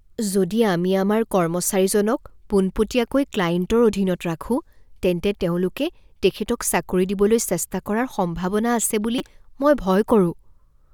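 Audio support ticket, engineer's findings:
Repeated buffer at 9.18 s, heard as a brief buzz in the speech: one 5.3 ms chunk plays three extra times, consistent with a 256-sample buffer underrun. Waveform shows identical cycles with hard joins.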